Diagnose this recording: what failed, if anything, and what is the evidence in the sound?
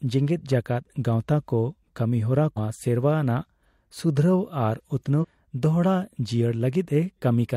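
The failure sits at the codec stage: damaged data in the compressed stream. Corrupted bytes in two stretches of the encoded file leave the decoder unable to parse those frames, so it loses sync and hunts for the next valid frame header before resuming. In the sound this gives two short, harsh blips breaking into the speech, one from 2.54 to 2.58 s and another from 5.18 to 5.25 s, each lasting well under a tenth of a second.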